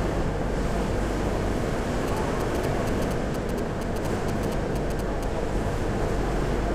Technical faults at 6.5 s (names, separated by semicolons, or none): none